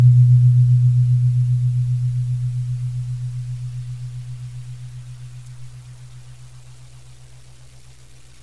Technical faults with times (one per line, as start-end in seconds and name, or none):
none